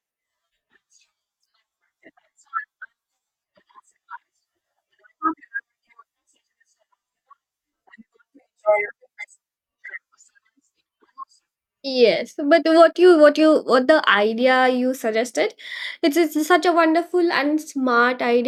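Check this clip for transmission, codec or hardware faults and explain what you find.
I find no faults in this clip.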